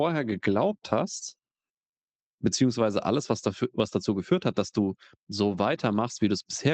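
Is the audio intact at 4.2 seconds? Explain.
Yes, the speech at 4.2 seconds is intact, carried cleanly through the Opus call path with its normal band limit near 8 kHz.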